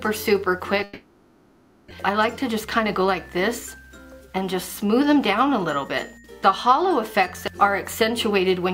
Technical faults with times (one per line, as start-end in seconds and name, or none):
0.83-1.92 long network dropout
1.94-5.85 jitter buffer speed-up